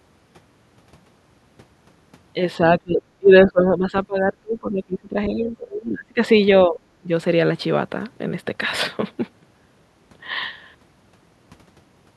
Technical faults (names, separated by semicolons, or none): speech suppressed in double talk